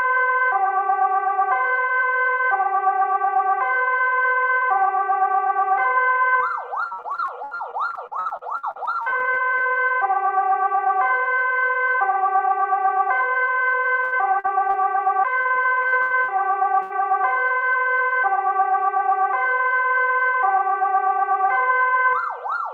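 The clip is everyday sound, and it is broken up by repeated packet loss, which gives it a robotic sound. From 6.87 to 9.74 s it turns choppy. Many short holes appear, the longest about 72 ms. Each is patched by stretching the last bit of sound, so about 27% of that stretch is filler. Shorter runs of the same fault follow from 14.04 to 14.76 s and from 15.42 to 16.30 s. There the longest gaps reach 77 and 84 ms. A single burst of packet loss follows at 16.82 to 16.92 s. For about 80 ms the receiver holds and fades the last sound. Then the audio jumps ahead, and what lay between is gone.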